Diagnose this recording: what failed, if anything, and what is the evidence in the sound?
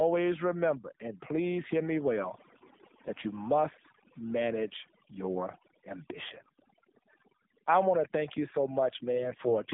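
Overdone noise removal at the call-processing stage runs throughout. Bands near the noise estimate are pulled to nothing, so pauses fall to near silence with twinkling specks. A spectrogram shows a blank floor dotted with isolated bright flecks.

The AMR narrowband mobile codec runs the whole clip, with plainly audible damage. The speech is buzzy and synthetic, and its pitch-pulse excitation suggests a low mode around 7.4 kbps. A spectrogram shows energy confined between about 200 Hz and 3.6 kHz, with nothing above.

AMR bit errors in the network path strike at 6.40–6.53 s and again at 9.13–9.56 s, right after "to thank you so". Flipped, weakly protected bits misplace the excitation pulses, so speech keeps its level but turns hoarse and gargly. The spectrogram shows smeared, noisy harmonics there.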